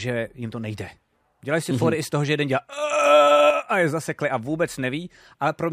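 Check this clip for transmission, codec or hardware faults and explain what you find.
One fault is audible in the speech. From 3.50 to 3.69 s, just before "a je zasekli a", the level drops abruptly by about 6 dB and then snaps back. This is one channel dropping out, likely a lost stereo channel folded into mono. Unlike a full dropout, the sound never goes silent; it is only halved.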